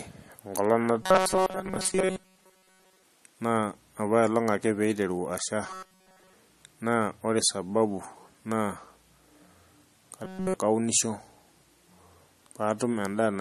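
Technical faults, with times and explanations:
Throughout: MP3 compression, likely at a low bitrate, leaves plainly audible watery, swirling codec damage and nothing above 13 kHz.
1.03–3.03 s, 5.66–6.33 s, 10.25–10.55 s: robotic sound from repeated short buffers, a rigid 188 Hz buzz, likely from about 5.3 ms chunks repeated while most of the real audio is skipped, all of it in the last span.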